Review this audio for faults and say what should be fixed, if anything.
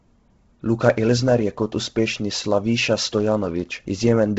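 Heavy coding damage runs through the entire speech clip, with nothing above 7.7 kHz and a breathy, grainy edge on the voice. This is likely Bluetooth LC3 compression at a low rate, which fits about 16 kbps with 10 ms frames. The codec zeroes much of the upper spectrum and patches it with noise. On a spectrogram there is a hard ceiling at 7.7 kHz, with speckled noise-fill below it instead of clean harmonics. To prevent it, record on the device itself or over a wired link, or raise the LE Audio bitrate and sample rate.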